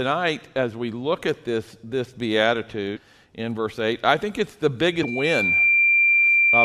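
Damaged data in a compressed stream at 2.95 to 2.98 s produces a brief blip. Corrupted bytes leave the decoder unable to read those frames, so it loses sync and skips ahead to the next valid frame header. A loudspeaker feedback squeal begins at 4.85 s and runs to the end of the clip. The microphone is picking up the loudspeaker it feeds, and at 2.4 kHz the loop gain exceeds one. That tone swells over about a second to sit roughly 5 dB above the sound. During the squeal, a second stretch of damaged stream data at 5.02 to 5.04 s adds another short decoder blip.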